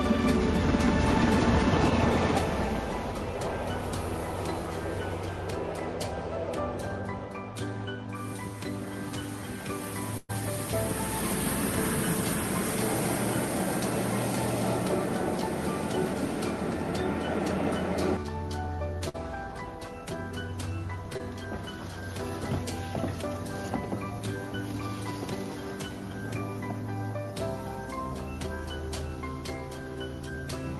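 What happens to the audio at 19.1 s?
At 19.09 s the audio hits a burst of packet loss that lasts until 19.24 s. A short run of audio never arrived in time, so the receiver stretched the last sound it had for about 50 ms and faded it down. The result is a brief held, dimming smear. A further 40 ms or so is simply gone. The audio then picks up again slightly further on, with a small jump where that stretch was skipped.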